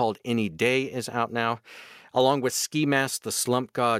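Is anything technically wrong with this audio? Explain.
No, nothing technically wrong can be heard here.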